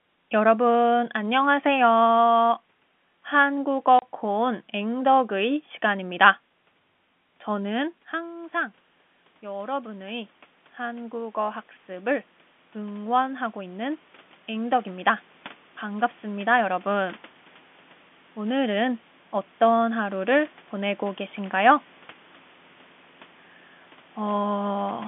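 At 3.99 s, packet loss filled with silence cuts a 30 ms hole into the speech, which fits a single lost packet. On the waveform it is a flat gap, and on a spectrogram a blank vertical stripe bounded by thin broadband lines.

From 7.5 s to 17.21 s, automatic gain rising follows the talker moving away, which dropped the input by about 15 dB. The control slowly adds about 12 dB, so voice and room noise swell back together. The waveform envelope grows gradually, and the spectrogram's noise floor brightens alongside the speech.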